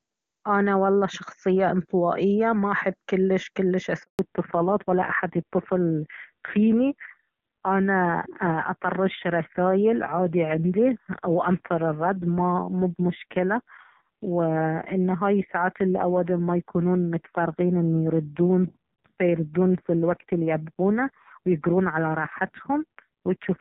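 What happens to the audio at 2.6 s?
Nothing goes wrong at 2.6 s: the speech there comes through intact, carried by the AMR wideband (HD Voice) codec at its top rate of 23.85 kbit/s, which leaves little or no audible coding damage.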